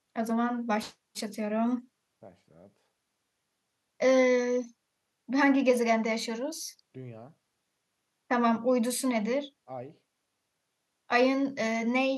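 No technical faults are audible anywhere in the recording.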